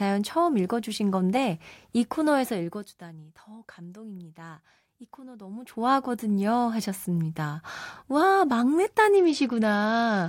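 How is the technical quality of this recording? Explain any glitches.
The recording has one clear fault: a Bluetooth SBC bit pool drop in the last second of the speech. From 9.17 s to the end at 10.28 s, the link appears congested and the phone cuts the SBC allocation. The sound points to a fall from a bit pool of about 28 to about 10, near 84 kbps. The upper sub-bands get almost no bits and the rest are coarsely quantised, so the treble goes dull and a gritty noise rises through the speech.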